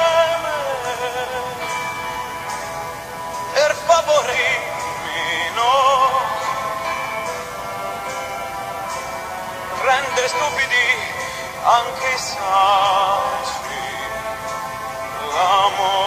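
At 4.28 to 4.33 s, and again at 10.27 to 10.33 s, a short burst of damaged data in a compressed stream breaks through, each lasting about 55 to 60 ms. Corrupted bytes make the decoder misread those frames and lose sync until it finds a valid frame header, so each burst sounds like a brief chirp, squawk, click or short hole.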